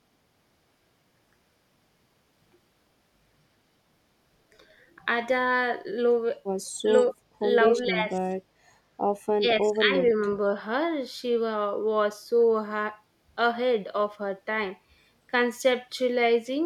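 At 6.84 to 6.88 s, 7.75 to 8.29 s and 9.37 to 9.91 s, the speech sinks by around 15 dB, first in a brief dip and then in longer patches. This is speech suppressed in double talk, likely an echo canceller mistaking the talker for loudspeaker echo while both sides spoke.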